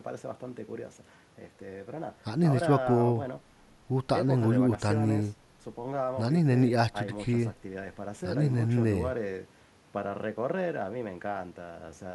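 No technical faults are audible anywhere in this speech.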